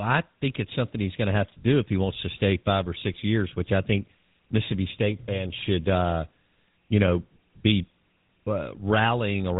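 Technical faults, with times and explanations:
throughout, GSM full-rate codec: plainly buzzy, gravelly speech with nothing above 3.8 kHz, as a sparse pulse train drives a vocal-tract model, which fits 13 kbps.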